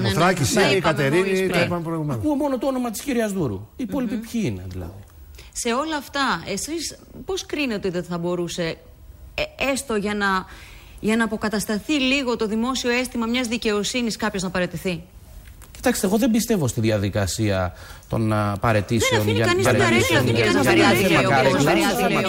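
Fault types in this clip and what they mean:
Doubled audio track: A second copy of the same sound is mixed in under the first, trailing it by about a second. It enters abruptly at 19.65 s and stays to the end. The copy is full-band and a few decibels quieter than the original. It has no decay or room colour of its own. The likely cause is the audio being captured again through a slower path, or an edit leaving two copies out of step.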